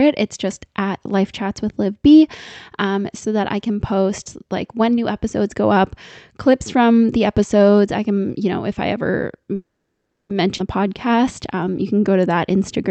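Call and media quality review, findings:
Call audio freeze, 9.55–10.32 s: sound halts for about 0.74 s, mostly silent after a brief fading tail. The likely cause is delayed packets draining the jitter buffer. Playback then resumes where it stopped, with nothing lost.

Skip ahead, 10.57–10.61 s: abrupt forward jump with almost no gap. Roughly half a second of speech is dropped, and the two sides are spliced nearly directly.

Jitter buffer slow-down, 10.81–12.89 s: speech runs at 94% speed with unchanged pitch and drawn-out sounds. Repeated pitch periods add 124 ms to rebuild the buffer reserve. The Opus call path stays band-limited throughout.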